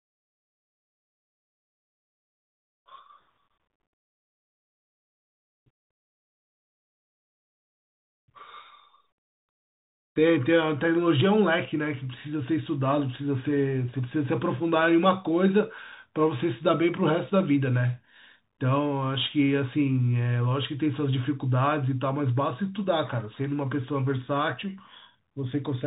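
Throughout the speech, the Bluetooth CVSD headset codec is plainly audible. Nothing passes above about 3.8 kHz, consistent with a 64 kbps one-bit delta stream. Its adaptive step can't keep pace with loud high energy, so s sounds turn scratchy over a constant granular hiss.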